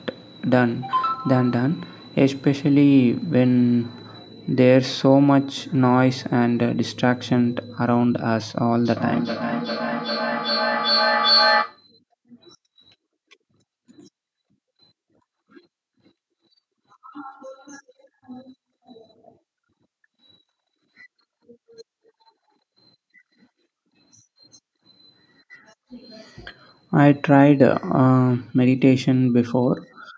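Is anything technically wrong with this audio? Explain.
Yes. From 8.85 to 11.84 s there is a feedback echo between two devices. A second device in the same room is on the call and plays back what this microphone sent, and the microphone picks it up again. The local echo canceller only removes its own device's output, so the sound returns roughly every 0.4 s, thinner and more ringing each pass, with the loudest repeat about 2 dB below the direct speech. The call microphone processing, with its bass high-pass and nothing above 8 kHz, is normal.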